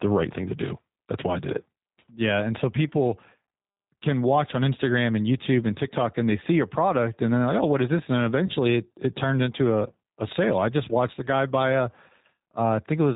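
The speech has passed through a G.729 codec at a rate consistent with an 8 kbit/s G.729 stream, which rebuilds each 10 ms frame from a vocal tract filter, a pitch predictor and a handful of pulses. Nothing above 4 kHz survives, so the clip sounds narrowband and dull. The coding damage is plainly audible throughout as a rough, slightly synthetic edge on the voice.

From 8.47 to 8.52 s there is VoIP packet loss concealed by the speech codec. About 20 ms of audio went missing, which fits two lost 10 ms frames, and the decoder filled the gap by extending its last pitch and filter with falling gain. The result is a brief stretched patch, a buzzy tone or coloured noise, that fades before the speech resumes on "it it turned into", with the voice still weak or distorted for tens of milliseconds as the decoder recovers.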